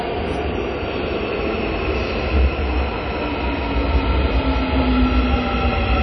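From start to finish the audio has a ringing, washy quality. A thin hiss swells and fades with the louder moments, and nothing is heard above about 9.9 kHz, which dulls the top end. This is WMA compression damage, likely from a simple early encoder at a low rate, fitting something like 32 kbps. Long transform blocks smear quantisation noise across tens of milliseconds, and weak components are discarded outright.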